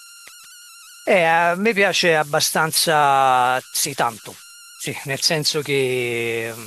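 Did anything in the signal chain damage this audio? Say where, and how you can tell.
Yes. Throughout the speech, a whistle around 1.5 kHz, about 22 dB below the signal, sits in pauses with grainy noise under quiet passages: converter idle tones from an undithered delta-sigma converter cycling bit patterns. Unlike hum, it isn't at mains frequency.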